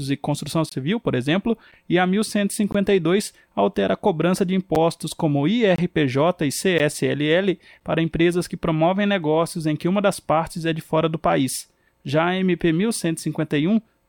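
Portuguese speech with a gap between stream segments: hard-edged silent holes of about 7 to 25 ms, roughly on 1 s segment boundaries, at 0.69–0.72, 2.72–2.75, 4.75, 5.76–5.78, 6.78 and 7.80 s, first just after "e construção". Segment timestamps don't quite meet, so the player pads with silence.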